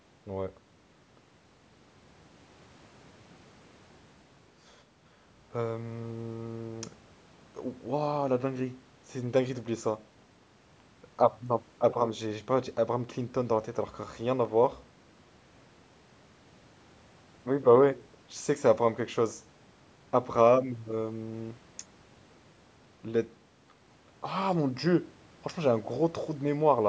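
No technical faults can be heard in this speech; the low bass is rolled off and nothing reaches above 8 kHz, as expected from a call microphone's processing.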